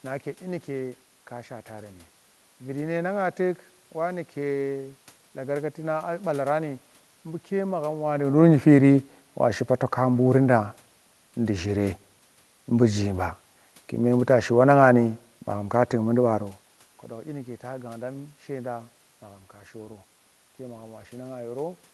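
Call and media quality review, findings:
No system faults found in this speech recording. Call path heard as codec audio with the top end stopping near 12 kHz, which fits Opus at 32 kbps; level shifts around 8 s and 16.5 s are the talker moving, with room noise throughout.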